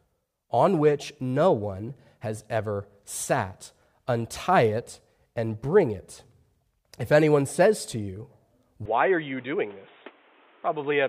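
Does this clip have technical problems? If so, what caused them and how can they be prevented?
Yes. From 8.86 s to the end, the input likely switched to a poorer device: with no gap at the switch, the speech loses everything above 3.8 kHz, drops about 5 dB, and picks up new background noise roughly 30 dB down. Locking the recording to one fixed input device prevents this.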